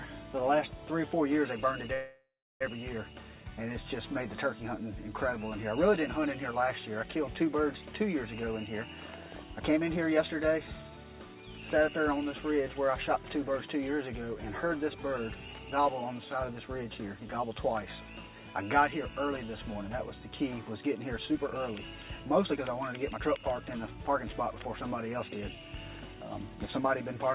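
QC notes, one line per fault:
1.94–2.63 s, call audio freeze: the last sound is held as a fading buzz or hiss, then about 0.34 s of silence; nothing is lost, so the following audio arrives 0.67 s late. This is likely a packet delay that emptied the jitter buffer. On the spectrogram it appears as smeared horizontal bands that decay into a flat gap.
9.59–11.36 s, 15.48–16.26 s, 21.19–24.34 s, jitter buffer speed-up: the sound runs at 112%, 108% and 112% speed with its pitch unchanged, so it sounds hurried. Roughly 0.2 s, under 0.1 s and 0.4 s of pitch periods are cut out. On the waveform these sections look slightly compressed in time, with no visible gaps.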